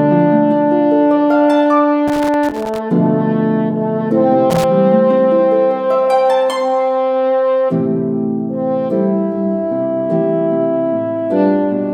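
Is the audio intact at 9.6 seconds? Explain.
Yes, the audio at 9.6 seconds is intact, with no dropout, click, distortion or other fault there.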